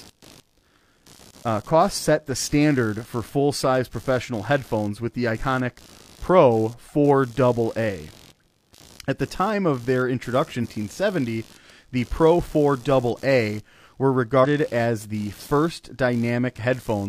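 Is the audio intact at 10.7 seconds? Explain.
No. Just after "time of their introduction", from 10.60 to 10.66 s, compressed frames are skipped. The decoder drops about 300 ms of speech, which fits seven frames of roughly 43 ms. The speech jumps ahead at the join. On a spectrogram the speech pattern shifts abruptly there, and the waveform shows a short discontinuity.

Computer activity noise also runs through this moment. The computer's load swings disturb the shared ground of the audio circuit, producing a buzzing, chirping hum around 70 Hz, about 30 dB below the speech. A spectrogram shows it as a faint band of closely spaced harmonics.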